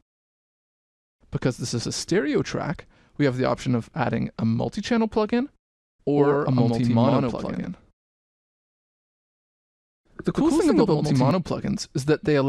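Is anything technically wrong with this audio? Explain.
Yes. From 6.17 to 11.31 s there is a doubled audio track: a second copy, roughly 100 ms late and about equally loud, likely from a second capture path. Unlike an echo, it has no decay or room colour and starts and stops abruptly.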